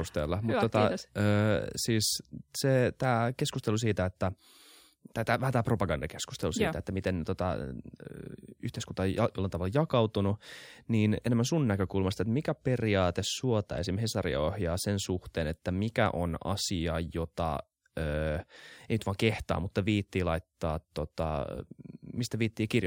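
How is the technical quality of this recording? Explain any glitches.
There's one glitch running the whole way through: imaging from linear upsampling. Straight-line interpolation filters poorly, so the top is dulled and a mirrored 12 to 24 kHz image, roughly 30 dB down, adds faint metallic shimmer to sibilants. That fits a 24 kHz source raised to 48 kHz.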